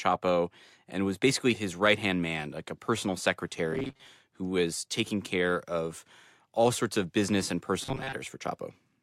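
From 3.73 to 4.08 s and again from 7.83 to 8.13 s, the speech turns into a rigid, metallic buzz fixed at 133 Hz: robotic sound from repeated short buffers. The likely cause is audio arriving too late, so a fragment of about 7.5 ms is looped to fill the gap. Roughly half the first stretch and most of the second is repeated material, with the real audio in between skipped.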